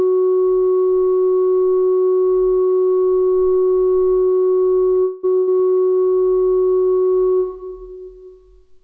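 A recording of everyday sounds that went over a call link, and the band stops at 8 kHz, which fits a wideband codec like G.722. At 5.04 s the sound hangs on and fades for about 0.19 s before picking up right where it left off, so nothing is lost but everything after lands later. That's a call audio freeze: packets were likely stalled in transit, the jitter buffer ran dry, and the receiver stretched the last sound until they arrived. Shortly after, from 5.37 to 5.49 s, there's a burst of packet loss. For 100 ms the receiver again carries the last sound forward and fades it, but this time the audio resumes further along, so that 100 ms of the original is gone rather than just delayed.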